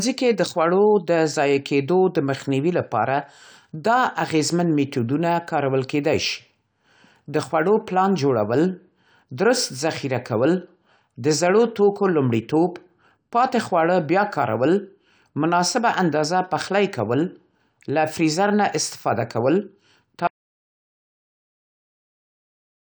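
At 20.27 s the speech cuts off into an audio dropout to silence, lasting to the end. The likely cause is a lost input, with silence written in its place.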